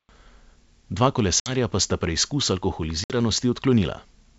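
Hard-edged holes at 1.40 to 1.56 s, just before "pa sta preizkus", and at 3.04 to 3.16 s, right after it, are followed by briefly distorted speech. This is packet loss on an ADPCM call: about 60 ms of audio, a few packets, was replaced by silence, and the G.722 decoder's predictor and step size drifted from the sender's until they resynchronised.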